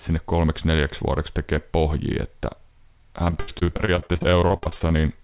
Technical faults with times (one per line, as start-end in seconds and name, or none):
3.24-5.04 repeated packet loss (robotic sound)